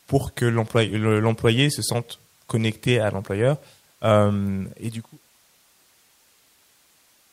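No technical faults are audible.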